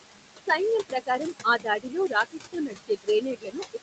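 Noise suppressor artifacts run through the whole clip. The suppressor pulls down the room noise by about 21 dB. That noise sits only about 8 dB below the speech, so the cut is heavy. Between phrases the background drops away. Under the speech it comes back.

From 0.89 to 2.36 s, the noise suppressor cuts speech. It treats parts of the speech as noise and turns them down with the background, by about 18 dB at the deepest point. Only about half a second of that stretch is affected. Those parts sound swallowed and faint.

From 2.52 s to the end, the suppressor cuts speech again, this time by about 21 dB. Soft sounds and endings fade out with the background.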